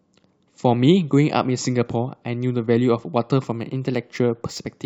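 From 3.31 s to the end, sample clock jitter adds a faint hiss to the speech. An unsteady converter clock of a few microseconds leaves error about 40 dB below the signal, strongest on loud, bright sounds.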